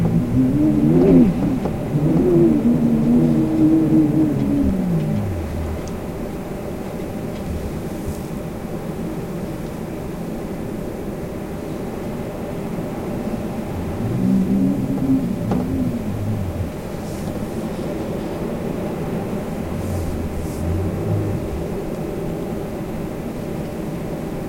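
No technical faults can be heard anywhere in this recording of sounds.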